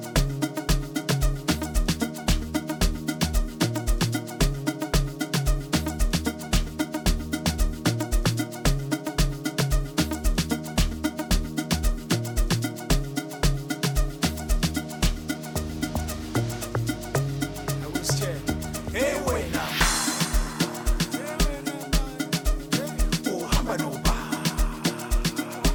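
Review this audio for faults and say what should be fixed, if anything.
Mains hum runs from 15.58 to 19.66 s as a steady 50 Hz tone, roughly 15 dB below the sound, from power-line coupling through a ground loop or nearby transformer. A spectrogram shows a flat horizontal line at 50 Hz. Break ground loops and route cables away from transformers.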